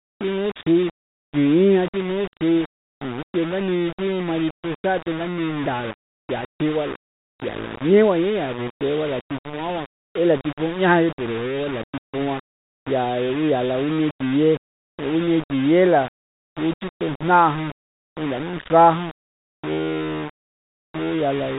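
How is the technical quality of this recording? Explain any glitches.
The recording is poor, with coarse grainy distortion throughout all 21 seconds of speech. The telephone-band coding is audible as a hard ceiling near 3.8 kHz, which fits 32 kbit/s G.726 ADPCM.

The grit is low bit depth without dither, most likely a reduction to about 5 bits with rounding. The error tracks the speech, sitting roughly 15 dB below it, so quiet syllables sound gravelly and sputtery. A waveform shows visible staircase steps, and a spectrogram shows broadband noise that appears only while speech is present.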